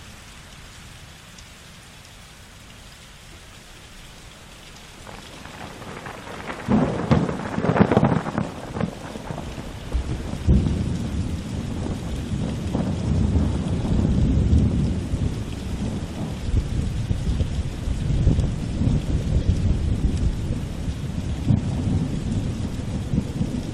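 You'll catch three short glitches of corrupt frame decoded: a faint one at 11.1 s, a louder one from 19.41 to 19.46 s spanning what sounds like two frames, and a very quiet one from 22.05 to 22.07 s. Damaged compressed frames got played anyway, so misread codes scatter energy at wrong frequencies briefly.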